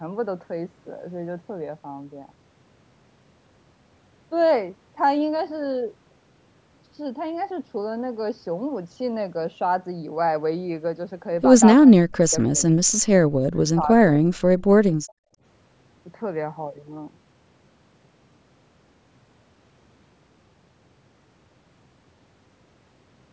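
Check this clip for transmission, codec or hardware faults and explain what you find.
Two echo-canceller faults are audible in this speech, both in the middle of the clip.

Speech suppressed in double talk occurs at 11.82–12.76 s, 12.92–13.09 s, 13.74–14.04 s and 14.21–14.27 s. The talker's level drops in chunks, by roughly 40 dB at the deepest except the third event, which dips only about 15 dB. The likely cause is both sides speaking at once: the canceller cannot tell near-end speech from loudspeaker echo and attenuates everything, so parts of the voice vanish.

Background gated by the echo canceller follows at 14.97–15.42 s. For a little under half a second, the room sound falls by about 39 dB, leaving near-silence, and then returns. The canceller is clamping the microphone hard while far-end audio plays through the loudspeaker, then releasing it. The audio band tops out at 8 kHz, as expected from call microphone processing.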